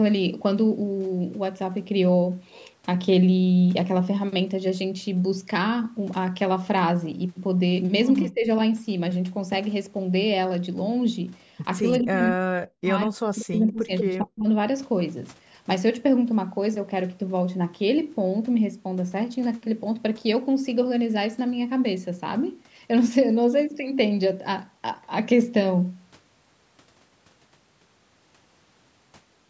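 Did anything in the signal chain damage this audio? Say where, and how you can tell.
Yes. At the call-processing stage, the echo canceller likely mistook double talk for echo. The speech dips by about 15 dB at 8.29–8.48 s, then cuts out almost completely, roughly 40 dB down, at 12.0–12.86 s and 13.06–14.47 s.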